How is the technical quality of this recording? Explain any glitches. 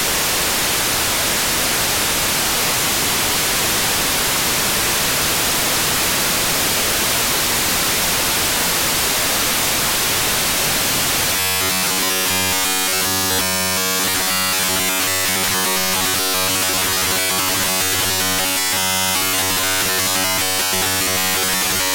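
The recording breaks down in its second half. From 11.33 s to the end, the sound turns into a rigid metallic buzz pitched at 93.8 Hz. This is robotic sound from repeated short buffers, likely caused by audio arriving too slowly, so a roughly 10.7 ms slice is looped over and over in place of the real signal.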